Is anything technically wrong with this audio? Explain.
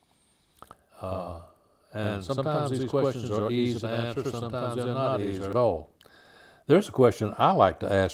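Yes. From the start to about 5.53 s there is channel delay (doubling): one channel runs about 85 ms late, which fits a 4096-sample buffer, and the mono sum hears each sound twice as an equal-level slap echo. Unlike reverb, it is one discrete repeat with no decaying tail.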